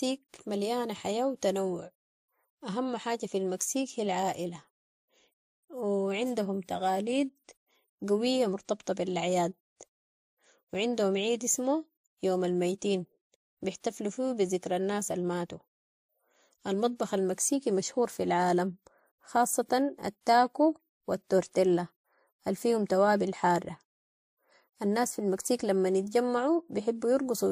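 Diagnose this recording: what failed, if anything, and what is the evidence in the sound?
Codec stage, throughout: the speech has nothing above 15.3 kHz and carries two overlaid sets of artefacts, those of a low-rate MP3 heard together with a second encoder's own. That points to transcoding between lossy codecs, likely MP3 re-encoded to WMA, each pass adding damage.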